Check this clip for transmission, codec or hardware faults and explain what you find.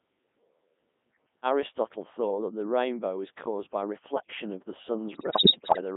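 Two faults are present: a very low-rate vocoder on the whole clip, and a burst of bit errors near the end.

Codec 2 vocoder, throughout: the speech is rebuilt from sine waves driven by pitch, voicing, energy and a spectral envelope rather than the original waveform. The heavy robotic buzz, confined to about 150 Hz to 3.6 kHz, fits the 3.2 kbit/s mode.

Bit errors on digital voice radio, 5.12 to 5.81 s, just after "by reflection of the": corrupted bits, at a high error rate of several percent, land in the vocoder's frame parameters. Pitch, level and timbre jump abruptly, and the speech breaks into warbling, bleeping gibberish.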